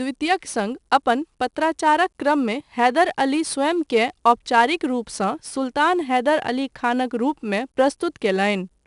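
Throughout the speech, the audio has been coded as 4-bit ADPCM, storing each sample as a coarse step from a prediction, which fits a bitrate near 89 kbps. The plainly audible quantization error rides as gritty hiss on louder syllables, and nothing remains above 10.6 kHz.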